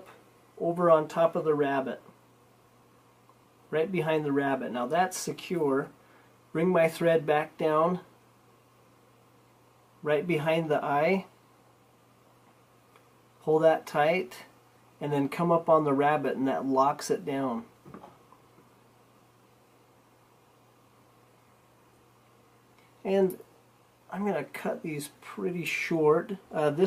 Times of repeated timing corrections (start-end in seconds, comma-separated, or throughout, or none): none